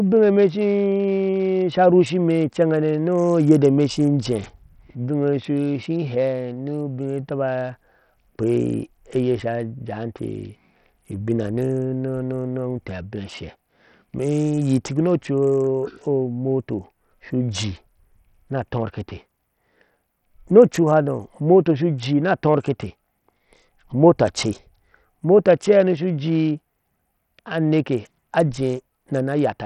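Throughout, the speech was likely squeezed through heavy Bluetooth SBC compression at a bitrate near 64 kbps, leaving the treble unstable and coarse, with gritty noise riding on it.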